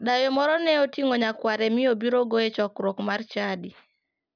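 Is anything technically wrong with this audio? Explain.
No, nothing stood out as technically wrong on listening to this speech clip.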